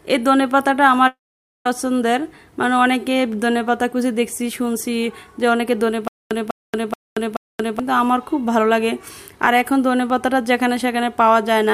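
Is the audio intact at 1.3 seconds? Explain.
No. A long network dropout covers 1.07 to 1.66 s. For about 0.58 s the audio simply stops, most likely because packets failed to arrive and the receiver had to fill the gap itself. The last sound is stretched into a brief fading buzz or hiss, then roughly half a second of silence follows, so 1.3 s falls in dead air. Playback resumes at 1.66 s further along, with the missing stretch gone rather than delayed.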